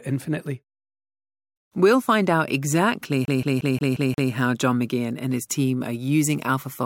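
A scratch sends the laser back one track on every disc turn, so from 3.25 to 4.32 s, just after "find out exactly", the speech gets the CD stuck on one turn: a 0.18 s fragment repeats six times, each jump marked by a brief mute, in a rapid, even stutter.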